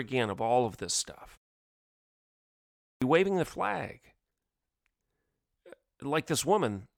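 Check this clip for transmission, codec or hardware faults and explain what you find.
One fault is present: a clipped start after a pause. After a 1.55 s silence, the output device had gone idle and needed time to wake. The first 176 ms of sound, 2.84 to 3.02 s, was swallowed. The audio then jumps in abruptly, just before "waving the flag".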